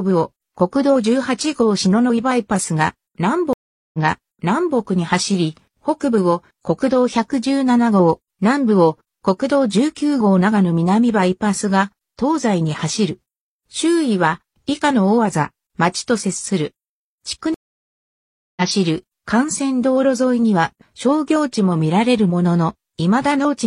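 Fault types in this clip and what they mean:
stream reconnect: The connection dropped and the player reconnected with a fresh decoder mid-stream. At 3.53 s, after a 0.4 s silence, the sound resumes 0.84 s earlier and repeats material. At 17.54 s, after a 1 s silence, it resumes roughly 0.7 s later and skips ahead.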